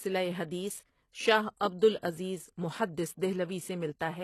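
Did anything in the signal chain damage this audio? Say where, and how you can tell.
Yes, at the codec stage, for the whole clip. Nothing reaches above 12.3 kHz, and the s sounds in the speech turn gritty and metallic. This is likely HE-AAC compression, rebuilding the treble from copied lower bands. The plainly audible damage fits a bitrate near 16 kbps.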